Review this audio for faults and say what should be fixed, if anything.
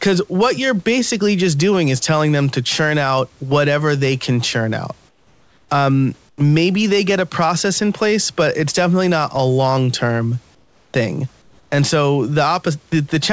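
Discontinuous transmission likely stopped sending during pauses, so the receiver substituted flat synthetic comfort noise in place of the background, which falls about 2 to 8 dB quieter and loses its texture. This happens at 5.09–5.69 s after "they can churn out", 6.29–6.38 s just before "maybe they get a", 10.55–10.94 s, and 11.42–11.72 s after "a long term thing". To prevent it, disable DTX or the voice detector on the sender.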